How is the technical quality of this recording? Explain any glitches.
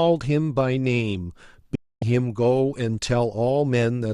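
One glitch stands out. From 1.75 to 2.02 s there is a digital broadcast dropout. The signal was lost or corrupted frames were rejected, so the receiver muted. The speech fades out within 3 ms and about 0.26 s is lost.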